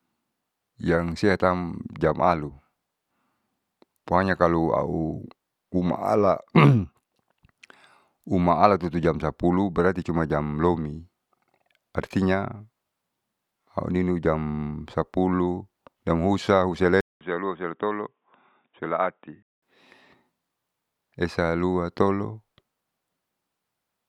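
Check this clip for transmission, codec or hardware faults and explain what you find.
One fault is present. From 17.01 to 19.62 s, after a 200 ms gap, the speech turns dull and boxy, nothing above 3.8 kHz, about 5 dB quieter: likely an input switched to a poorer device.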